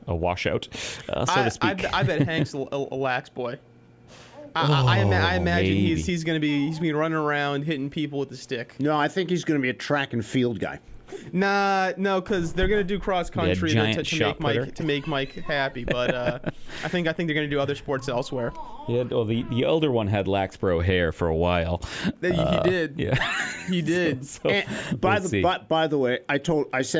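No technical faults can be heard anywhere in the clip. Nothing in the capture or playback chain draws attention to itself at any point.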